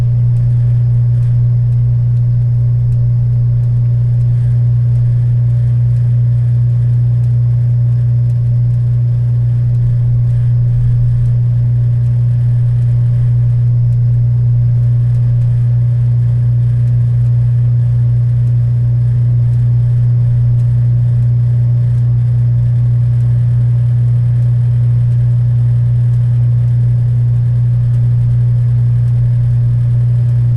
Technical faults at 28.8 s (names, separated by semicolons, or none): none